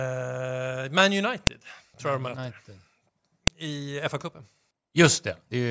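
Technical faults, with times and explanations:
1.47 s and 3.47 s, file header played as audio: a sharp, loud click lands exactly 2 s apart, where joined WAV pieces left their header bytes in the stream to play as samples. Unlike random clicks, it keeps that strict 2 s rhythm and ignores what the speech is doing.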